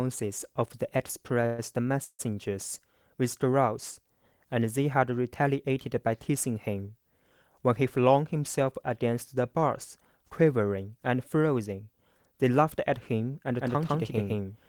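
At 1.46 to 1.60 s and again at 2.04 to 2.21 s you get a call audio freeze: the sound smears into a fading buzz for 120 ms and then 147 ms, the second one dropping to silence for its last 60 ms. Then it picks up right where it left off, so nothing's missing. That's most likely late packets draining the jitter buffer.

From 7.70 to 8.23 s and 12.43 to 13.21 s there's jitter buffer speed-up. The receiver snips out tiny pitch-period chunks to shed excess buffered delay, so the speech runs about 7% fast at unchanged pitch. Around 40 ms goes the first time and about 70 ms the second, and it feels a bit rushed.

From 13.59 s to the end there's a doubled audio track: a full-band copy at about the same level trails by roughly 150 ms. It cuts in abruptly with no room decay, likely a second, slower capture path.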